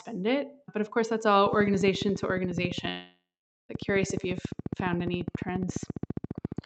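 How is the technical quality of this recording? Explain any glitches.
The recording has two clear glitches on top of a call-codec path whose spectrum stops near 8 kHz.

Train of clicks: From 1.46 s, right after "of course that's", to the end, regular clicks arrive about 14.4 times per second, peaking about 10 dB above the speech. The likely cause is interference or a faulty connection or power supply. They tick through pauses too, showing as evenly spaced vertical lines on a spectrogram and sharp spikes in the waveform.

Long network dropout: From 2.89 to 3.71 s, about 0.8 s of audio likely never arrived over the network. The receiver stretched the last sound into a fading buzz or hiss, then about 460 ms of silence. The waveform shows a smeared tail collapsing to flat, and the spectrogram a blurred band, then a gap.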